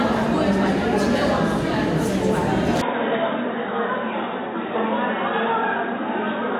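At 2.82 s the sound abruptly turns dull and boxy and stays that way to the end, with no gap at the change. Everything above about 3.8 kHz is gone, the level drops by roughly 5 dB, and a faint new background noise appears, around 45 dB below the signal. This is likely an input switched to a poorer device mid-recording, such as a lesser microphone or a headset's call profile, whose narrower band, different gain and own noise floor replace the original input's.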